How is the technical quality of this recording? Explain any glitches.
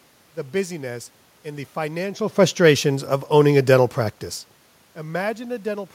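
No technical faults are present.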